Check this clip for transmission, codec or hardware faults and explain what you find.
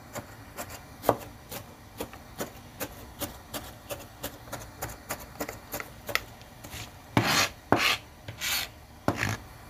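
No faults of any kind can be heard here.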